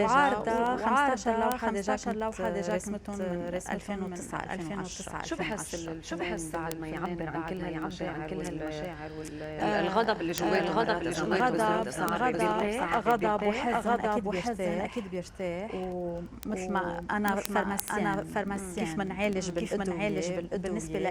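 From the very start there's a doubled audio track. A second full-band copy of everything trails the original by roughly 0.7 s, at about the same level, so every event arrives twice. The copy is dry, with no decay or room colour, so it reads as a pasted duplicate rather than an echo. The likely cause is the same signal being picked up again through a slower path, or an edit that left two copies out of step.

From 0.15 s right to the end there are word clock ticks. They're sharp clicks of uneven strength, arriving at a steady rate of about ten a second. That pattern fits a digital link read by a device free-running on its own clock, drifting from the sender's by around 200 ppm. Each time the two clocks slip past each other, a sample gets dropped or repeated, and the discontinuity pops.

From 12.65 s to 17.23 s there's a call bitrate drop. The sound gets coarse and watery, and the top end thins out, because the encoder was pushed down to far fewer bits. 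The change in quality fits a fall from around 64 kbps to around 21 kbps. It's roughest for about 1.8 s at the bottom of the dip, then the detail comes back as the bitrate recovers.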